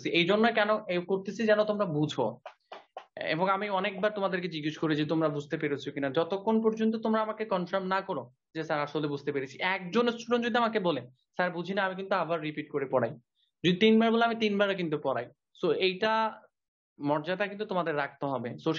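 No technical faults are audible.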